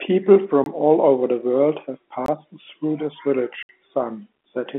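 Blocks of digital silence cut the speech at 0.64–0.66 s, 2.26–2.28 s and 3.63–3.69 s. Each drops abruptly to silence. The first two last about 21 ms, which fits an unfilled 1024-sample buffer. The third lasts 64 ms.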